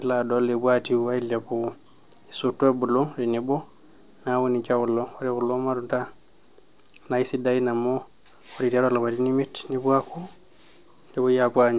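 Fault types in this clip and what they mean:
There are no fault types in this clip, so there is nothing to explain.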